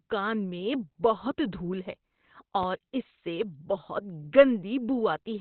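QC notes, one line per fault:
Throughout, Opus compression in its speech mode, likely at a low rate near 12 kbps. Nothing is heard above about 4.4 kHz, so the speech is narrowband and sounds muffled, like a telephone line. The damage is heavy. At so few bits the encoder models the voice coarsely instead of keeping every band. Consonants lose their crisp edges, and the voice turns hoarse and rough.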